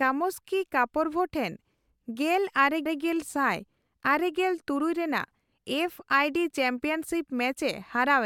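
A speech recording with one repeated-frames fault: the stretch from 2.85 s to 2.99 s, a 144 ms block, plays twice in a row, producing a brief stutter where the same fraction of a second recurs. The repetition points to a short run of compressed frames, consistent with about six frames, being written or transmitted a second time and decoded again. The extra playback adds 144 ms to the clip's duration.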